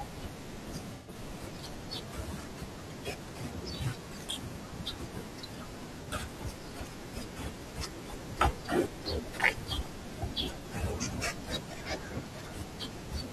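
Speech with AAC frame loss with concealment at 0.95 to 1.15 s, 6.03 to 6.08 s, and 10.59 to 10.66 s. Missing data, about 128 ms then 43 ms each, is patched from earlier spectrum, sounding smeared and phasey.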